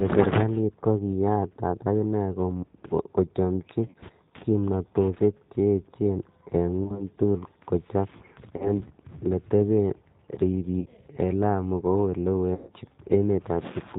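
Speech runs through a G.729 codec for its whole length, and the coding damage is plainly audible. The sound is band-limited to 4 kHz, and it has the slightly rough, synthetic texture of a low-rate predictive coder, consistent with 8 kbit/s G.729A. VoIP packet loss concealed by the speech codec breaks in five times: at 3.86 to 3.99 s (about 80 ms lost, scattered), 6.84 to 7.02 s, 8.57 to 8.71 s, 10.80 to 10.89 s, and 12.55 to 12.72 s, the longest at 130 ms. At each gap the decoder extends its last pitch and filter state into a fading buzzy tone or coloured noise, and the voice stays weakened briefly after the packets resume.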